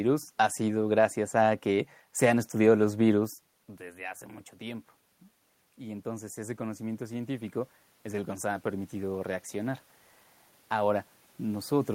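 From 5.78 s to 9.85 s there is automatic gain rising. The input level dropped by about 13 dB, and the gain control slowly added about 8 dB in response. Voice and room noise swell together over those four seconds rather than the voice alone recovering.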